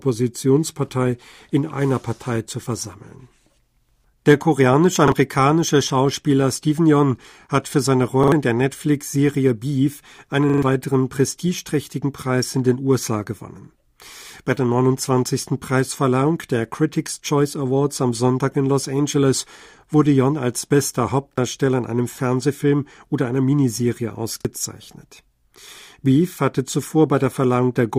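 Five repeated buffer stutters in this speech, all the same size, about 43 ms, which fits a 2048-sample buffer being replayed when fresh audio arrived late. They fall at 5.08 s, at 8.24 s between "hat für seine" and "in der" (two extra plays), at 10.50 s just before "weiteren prestigeträchtigen" (three extra plays, longest), at 21.33 s between "als bester" and "in einem", and at 24.41 s. Each repeat has a hard join, giving a quick stammer and dropping roughly 40 to 150 ms of real audio.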